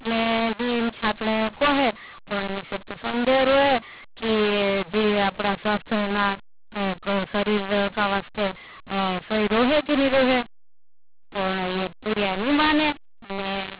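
From start to finish the speech carries a mu-law and A-law mix-up. The telephone audio was coded with mu-law but decoded as A-law, so each 8-bit code lands on the wrong level. Some samples swell, others shrink, and near-silent ones jump well above zero, giving harsh distortion and a hiss through the pauses. Ordinary G.711 quantisation noise stays faint and follows the signal, but this noise persists in the gaps.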